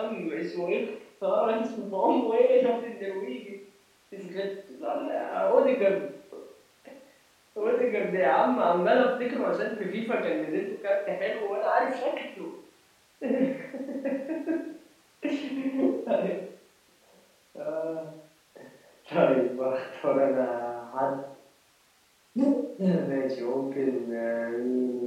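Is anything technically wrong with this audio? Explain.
No, nothing is technically wrong.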